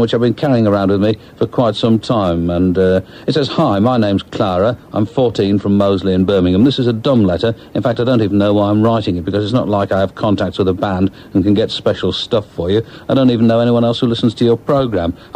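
No faults can be heard anywhere in this clip.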